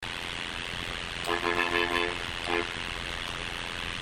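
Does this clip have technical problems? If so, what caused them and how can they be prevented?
Yes. Throughout the clip, overlap-add ripple occurs: the audio was split into windowed frames and rejoined with an overlap that does not sum to constant gain, so the level dips by about 60 dB once per frame, around 100 times a second, producing a metallic buzz with extra tones around each sound. To prevent it, pair the window shape with a hop size that satisfies the constant-overlap-add condition, or normalise the output by the summed window.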